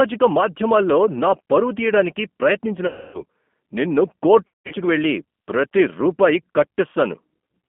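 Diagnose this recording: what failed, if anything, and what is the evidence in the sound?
The codec stage failed: the speech runs through G.729 at 8 kbit/s throughout, confined to a telephone band of roughly 200 Hz to 3.4 kHz. The narrow band alone would only sound muffled, but here the audio is also plainly rough and synthetic. That texture comes from the decoder rebuilding each 10 ms frame from a vocal-tract filter, a pitch predictor and a few pulses, which distinguishes it from a simple low-pass filter.

The network stage lost packets, and the speech codec concealed them. From 2.87 to 3.21 s, about 270 ms is missing. From 4.47 to 4.74 s, just before "వెళ్లి ప్రతి రూపాయి", 210 ms is lost in patches over 240 ms, with the longest run 180 ms. The losses point to 30 ms packets. Unlike a dropout, these do not cut to silence or click. The last sound is stretched into a fading buzz or coloured noise, and the voice stays degraded briefly as the decoder recovers.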